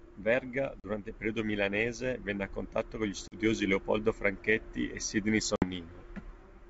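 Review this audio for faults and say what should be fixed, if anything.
Packet loss on an ADPCM call cuts hard-edged silent holes at 0.80–0.85 s before "il periodo", 3.28–3.36 s after "a contatto con gli", and 5.56–5.65 s. The receiver's predictor and step size lose sync with the sender's. Speech resumes distorted, then settles. Packet-loss concealment that resets decoder state would prevent this.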